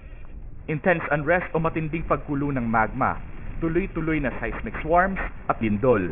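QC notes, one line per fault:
throughout, aliasing: the audio was brought down to a much lower sample rate with no anti-alias filter beforehand, which fits a drop from 48 kHz to 6 kHz, so everything above the new 3 kHz limit folds back below it instead of being removed. Those folded components land at unrelated pitches, sitting not far under the wanted signal, perhaps 15 dB down. Sibilant and bright content turns gritty and metallic, and the spectrum stays dense right up to 3 kHz before stopping abruptly.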